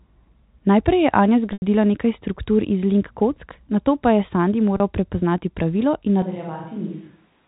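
At 1.53 to 1.62 s, just before "nekaj struktur iz link", there is packet loss with pitch repetition. About 90 ms of audio went missing, which fits three lost packets. The receiver filled the gap by looping the last pitch period, so the sound briefly holds a buzzy, frozen tone that fades toward silence before the speech returns with a soft cross-fade. A plain dropout would leave a hard silence or a click instead.

At 4.77 to 4.80 s, before "prepoznati pravilo", a second loss of about 30 ms, consistent with a single packet, is short enough that the repeated pitch period never fades to silence. It comes across only as a slightly stretched, buzzy moment.

From 6.22 s to the end, the sound abruptly turns roomy and hollow, with thinner bass, a level about 10 dB lower, and room noise sitting roughly 30 dB under the speech. The likely cause is a switch to a distant microphone. Added reverb or a simple gain drop would not shift the tone, the level and the noise floor all at once like this. 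The narrow telephone band of the G.711 coding stays the same across the switch.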